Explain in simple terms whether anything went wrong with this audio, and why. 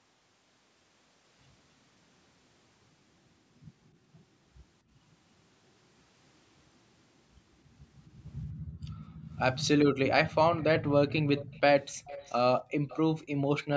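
The echo canceller, working on a call played over a loudspeaker, turned the microphone down hard at 8.51–9.26 s, 12.70–12.81 s and 13.35–13.51 s. This is background gated by the echo canceller: the room sound dips sharply or drops out briefly, then returns.

An echo leak also seems likely: the canceller didn't fully remove the loudspeaker sound, so some was sent back. A faint, delayed copy of the speech trails by about 0.29 s at 10.57–10.64 s, 11.36–11.60 s, 11.82–12.33 s, 12.88–12.97 s and 13.19–13.25 s.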